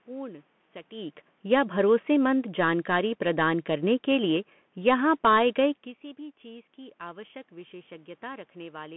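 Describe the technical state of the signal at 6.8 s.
At 6.8 s the signal is still passing through the Bluetooth CVSD headset codec, which is active for the whole clip. The link sends one bit per sample at a rate consistent with 64 kbps, signalling only up or down with an adapting step size, and the line band sits at about 150 Hz to 3.4 kHz. The speech sounds narrow and boxy, with scratchy sibilants, slope-overload roughness on louder bright sounds, and a granular hiss underneath.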